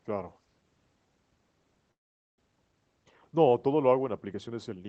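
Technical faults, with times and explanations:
1.91 to 2.40 s, long network dropout: Audio most likely stopped arriving for about half a second, so the receiver stretched the last sound into a fading buzz that gives way to silence. When sound resumes, roughly 0.3 s of the original is simply gone.
2.47 to 4.48 s, jitter buffer speed-up: The buffer held more audio than it aims for, leaving it over-full by around 150 ms. The receiver trimmed pitch-period slivers repeatedly, so the sound plays about 8% faster at unchanged pitch and feels hurried, within Opus's band up to 8 kHz.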